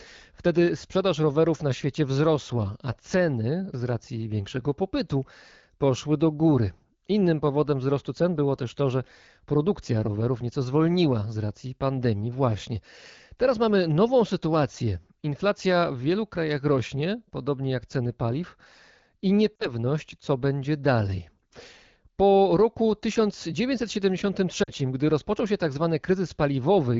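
At 19.55 to 19.67 s, just before "co będzie dalej", and again at 24.63 to 24.72 s, lost AMR speech frames cause brief dips. About 40 ms of speech goes missing each time, which fits two frames. The wideband decoder fills the gap with fading guesses, and the speech drops to near silence before the voice comes back weak or rough for a moment.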